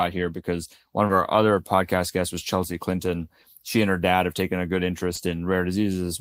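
A speech recording with short concealed packet loss at 1.07, 3.41 and 5.15 s. Each time about 20 ms of audio arrived too late for the decoder. The receiver bridged the gap by extending the preceding sound, then blended back. Each event is a brief smear or wobble.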